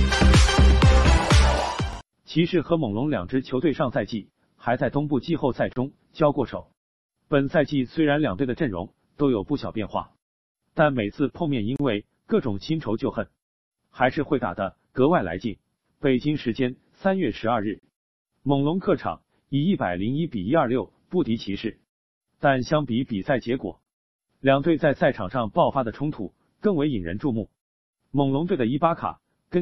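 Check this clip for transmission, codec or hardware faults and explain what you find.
The clip was assembled from separately encoded pieces joined without trimming. This produces a gap at a join of encoded pieces, at 5.73, 11.76, 17.80 and 23.83 s, every 6 s. Encoder start delay and last-frame padding leave gaps of 29 to 34 ms. There, the continuous sound drops out with smeared edges and resumes where it stopped.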